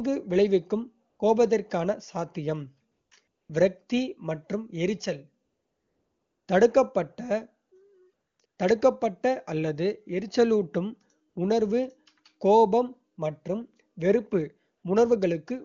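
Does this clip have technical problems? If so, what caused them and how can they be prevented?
Yes, there's AMR comfort noise. Ten times between 1.09 s and 14.83 s, the phone decided nobody was talking and stopped sending speech frames. The receiver then patched gaps from 20 ms to about 1 s with smooth synthetic hiss in place of the real background. Relaxing or disabling the sender's voice activity detection prevents it.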